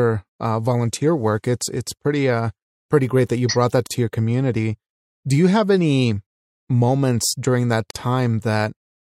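At 3.87 s and 7.91 s, spaced every 4 s, the speech breaks for about 38 ms and 49 ms. This is a gap at a join of encoded pieces, where encoder delay and padding were left untrimmed. Each appears as a brief blank vertical strip on the spectrogram.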